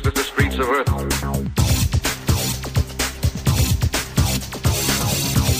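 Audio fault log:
No faults detected in this clip.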